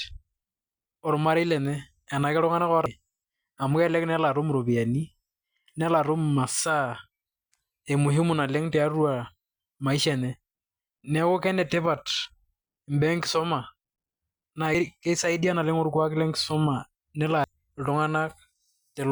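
Short blips break into the speech at 2.86, 14.75 and 17.44 s. Each is damaged data in a compressed stream: corrupted bytes make the decoder misread the frame there and lose sync until it locks onto the next valid frame header.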